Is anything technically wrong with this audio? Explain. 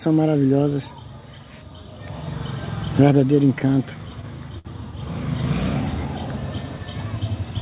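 Yes. Between 3.59 and 4.67 s there are repeated stalls (stutter). Packets arrived late, so the jitter buffer ran dry six times. The receiver stretched the last sound across about 121 ms in total, with the longest gap 61 ms. Nothing is lost, but the audio drags and hiccups. On a spectrogram, short smeared or repeated frames interrupt the texture. In the waveform, brief looped or fading segments appear.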